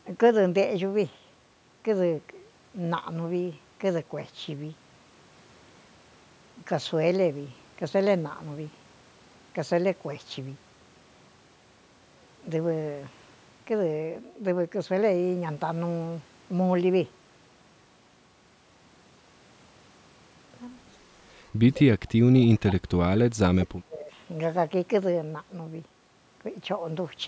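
At 21.74 s and again at 22.67 s, faint copies of the speech return about 208 ms late, each lasting under a tenth of a second and sitting well below the direct sound, the second quieter still. This is likely echo leak from a far-end loudspeaker the echo canceller did not fully cancel. A spectrogram shows weak, smeared repeats of the preceding harmonic patterns.

From 23.12 s to 24.15 s the speech dips and breaks up for about a second, sinking by as much as roughly 30 dB, likely speech suppressed in double talk as the canceller ducked everything while both ends overlapped. The waveform's envelope collapses in patches, and the spectrogram shows the upper bands, already ending at 8 kHz, thinning into gaps.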